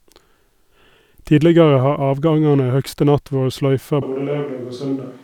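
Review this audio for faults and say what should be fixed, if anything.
From 4.02 s to the end, the speech turns suddenly roomy and hollow, losing bass, dropping roughly 5 dB in level, and gaining a faint layer of room noise well below the voice. The sound never returns to its earlier close, full character. The cause is likely a switch to a distant microphone: the close mic's signal dropped out or went unused, leaving a pickup farther away that captures more room and less low end. Monitor the close mic throughout recording and keep a backup close mic running so a failed channel can be replaced.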